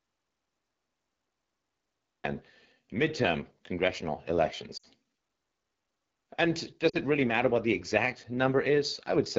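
From the start until 2.24 s the recording is silence with no room tone, an audio dropout to silence already under way when the clip begins. The likely cause is a lost input feed, with the encoder writing silence until the signal returned.

The entire clip is coded with the AMR wideband (HD Voice) codec at 8.85 kbit/s, the second-lowest rate. At that rate the pulse-driven vocal tract model leaves the speech plainly rough and raspy, with a noise-filled top band above 6.4 kHz.

Lost AMR speech frames occur from 4.77 to 4.86 s, right after "midterm congressional". The gap points to about three 20 ms frames failing their check. The decoder stretched the last good pitch and vocal tract settings with falling gain, so the sound drops to near silence before recovering roughly. A shorter loss of about two frames at 6.89 to 6.97 s, just before "it really matter what", drops the sound to near silence before the voice returns.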